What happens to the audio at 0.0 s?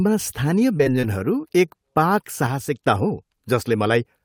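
Nothing goes wrong at 0.0 s; the audio is intact at that moment.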